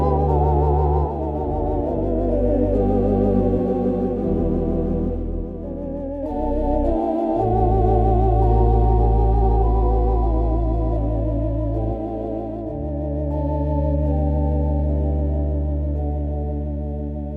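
A doubled audio track runs through the whole clip: every sound is followed about one second later by a second, full-band copy roughly 10 dB quieter. The late copy carries no decay or added room colour, so it reads as a clean, discrete repeat rather than an echo, and it overlaps whatever comes next. The likely cause is the same signal being captured again through a slower path, or an edit that left two copies out of alignment.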